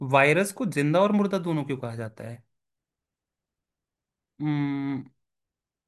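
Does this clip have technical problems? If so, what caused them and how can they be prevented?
No, nothing in this speech recording stood out as a technical problem on listening, so there is nothing here that needs preventing.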